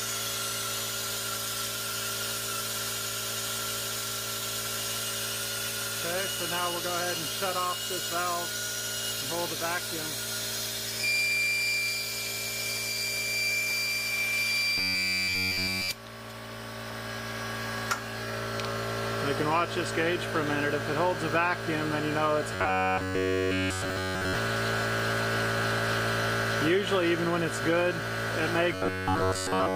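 Robotic sound from repeated short buffers at 14.78–15.89 s, 22.55–24.35 s and 28.72–29.75 s: a rigid 93.8 Hz buzz, likely from roughly 10.7 ms chunks being looped in place of the real audio.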